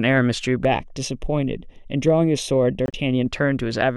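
From 0.65 to 3.26 s, channel delay (comb filtering): one channel lags by about a third of a millisecond, so summing to mono carves fixed notches starting around 1.5 kHz, sounding hollow and phasey, with evenly spaced dark stripes on the spectrogram. Between 2.86 and 2.94 s, a corrupt frame muted: the decoder rejected damaged compressed data, leaving an abrupt 84 ms silence that fits about three codec frames, a flat gap in the waveform.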